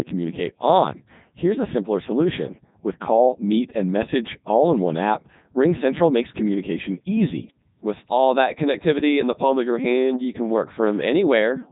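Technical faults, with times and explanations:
Throughout, Codec 2 vocoder: the speech is rebuilt from pitch, voicing and a coarse spectral envelope instead of the original waveform. This gives a heavily robotic, buzzy sound that fits the 3.2 kbit/s mode. A spectrogram shows stiff, evenly spaced harmonics and nothing above 3.8 kHz.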